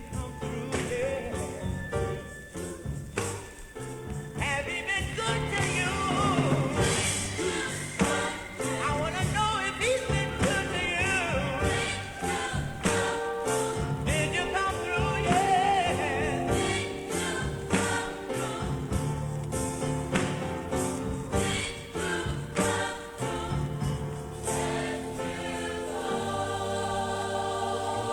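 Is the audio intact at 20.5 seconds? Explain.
No. At 20.5 seconds the sound carries low bit depth with dither, present for the whole clip rather than only at that moment. The signal sits on roughly 9 bits, and dither was added before each sample was rounded, so the rounding error turns into steady white noise instead of distortion. What you hear is a constant, even hiss, roughly 35 dB below the signal, with no grit or crackle riding on the sound.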